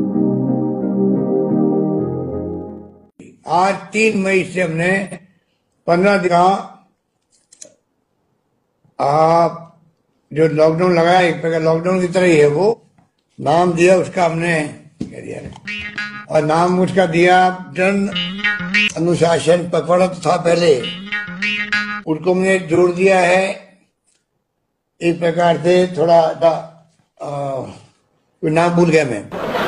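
At 1.68, 6.23, 11.15, 12.68, 16.30, 26.38 and 28.33 s the audio jumps ahead as compressed frames are skipped. Each jump drops roughly 50 to 300 ms, the longest at 28.33 s, in steps that fit a 46.4 ms frame. A waveform shows an abrupt change in envelope, and a spectrogram shows a vertical seam where the content shifts.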